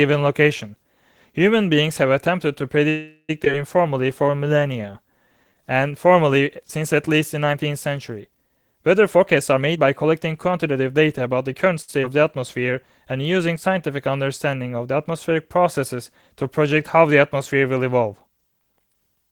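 Call audio freeze, 2.89 to 3.31 s: the speech stops moving forward and the last sound is drawn out as a fading buzz or hiss for about 344 ms. This ends in roughly 50 ms of silence before the speech resumes exactly where it left off. This is likely packets held up in transit, emptying the jitter buffer, which then had nothing new to play. Nothing is lost, but a 394 ms gap is inserted into the timeline.

Skip ahead, 3.45 to 3.48 s: right after the freeze, the speech jumps forward with only a tiny 9 ms bridge. Around 300 ms of speech vanishes, and the two sides are butted together. A stretch of audio was dropped while later audio was already queued.

Jitter buffer slow-down, 3.82 to 5.93 s: the speech plays at 87% speed without any change in pitch. Sounds are drawn out as single pitch periods and pause fragments are repeated over and over, adding 285 ms to rebuild the buffer's reserve.

Jitter buffer speed-up, 9.16 to 11.73 s: the speech runs at 111% speed, still at the same pitch, and sounds hurried. 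Short slices of one or a few pitch periods are cut out repeatedly, removing around 300 ms to pull an overfull buffer back toward its target delay.

Short stall from a late packet, 11.82 to 11.90 s: a sound hangs on too long with a slight buzz or dip. The receiver stretched the last audio for 63 ms while a packet was overdue, then carried on from the same point with nothing missing.

Skip ahead, 12.02 to 12.05 s: a second, smaller jump drops about 70 ms of speech behind a 7 ms join.

Jitter buffer slow-down, 12.09 to 13.34 s: a milder stretch at 95% speed adds 69 ms, so the speech drags slightly.

Jitter buffer speed-up, 18.30 s to the end at 19.31 s: the speech is again rushed at 111%, with about 100 ms trimmed out.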